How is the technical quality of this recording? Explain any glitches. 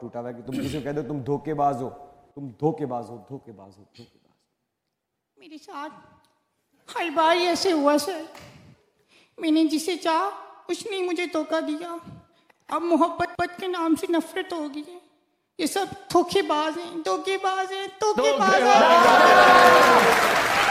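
No glitches, dropouts or other transmission faults can be heard in this recording, and the signal holds together as a continuous, intact stream throughout.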